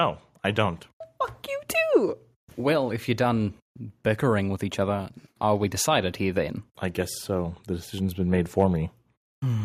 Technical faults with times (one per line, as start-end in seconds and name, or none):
none